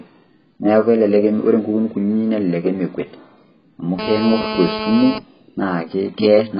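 Speech throughout, and it sounds dull and smeared with nothing above about 5.1 kHz, likely heavy AAC compression at a very low bitrate, something around 12 kbps. From 3.99 to 5.18 s there's a hard, raspy GSM phone buzz at 217 Hz, about 6 dB below the speech, steady like a handset mid-call pulsing its transmitter.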